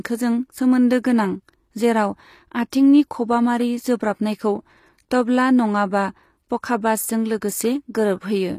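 Throughout the speech, the treble appears to be rebuilt rather than coded, likely from HE-AAC compression, which carries only the lower spectrum and copies it upward. The result is audibly damaged: sibilants sound gritty and lispy, nothing sits above 15 kHz, and the coarseness fits a bitrate near 24 kbps.

From 2.70 to 2.72 s, a pre-echo appears. The codec spread its quantisation noise across a whole block, so noise meant for a sharp attack leaked about 23 ms ahead of it. A brief hiss precedes the onset, which sounds softened and smeared.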